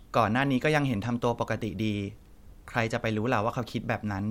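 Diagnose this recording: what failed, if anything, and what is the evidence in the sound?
Nothing failed at any stage: the speech shows no audible defect anywhere in the recording.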